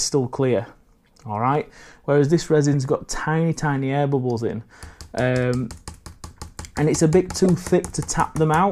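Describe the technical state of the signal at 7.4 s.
At 7.44 to 7.46 s a corrupt frame decoded fault spans a couple of damaged frames that were played anyway, scattering energy to wrong frequencies as a brief glitch peaking near -10 dBFS. Unlike a lost frame, it adds a foreign sound rather than a gap or a smoothed-over fill.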